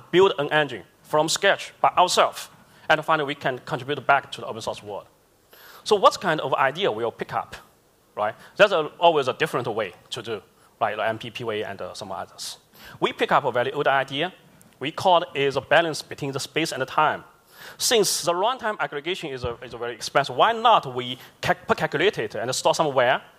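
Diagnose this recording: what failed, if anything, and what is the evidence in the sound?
From 18.26 s to 19.99 s the level falls abruptly by about 6 dB, then recovers just as suddenly. This is one channel dropping out for about 1.73 s. The stage is likely the analogue wiring, such as an intermittent cable or connector on one side. When the sound is summed to mono, anything common to both channels loses half its contribution. That produces the 6 dB step. Anything present only in the lost channel vanishes for that span.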